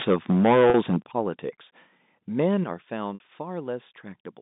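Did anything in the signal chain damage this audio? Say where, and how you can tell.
Yes, at three stages. The first is microphone overload at the converter, from 0.00 to 0.96 s, with the peaks driven about 11 dB past full scale and roughly 15 percent of samples flattened. The squared-off tops give the loudest syllables a harsh, crackling edge. A milder overload at 2.39 to 2.46 s sits only about 1 dB over, clipping a few percent of samples, so there is just a brief grit. The likely cause is microphone input gain set too high.

The second is microphone volume stepped down in the call processing, heard as sudden level drops in both the sound and the background at 0.02 s (about 4 dB), 1.02 s (about 11 dB) and 2.64 s (about 7 dB). Each drop is a clean step rather than a fade, and the last two come just after clipped passages. The level jumps likely come from the software's automatic gain control cutting the device input volume after detecting overload.

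The third is packet loss with pitch repetition on the network path. At 0.70 s about 40 ms is missing, which fits two 20 ms packets. The receiver's repeated pitch cycle bridges the gap, so the sound holds briefly on a slightly buzzy tone. At 3.14 s the gap is about 60 ms, which fits three packets. There the repeated cycle fades toward silence before the signal cross-fades back in. The 150 Hz to 3.7 kHz band limit is simply the G.711 telephone line.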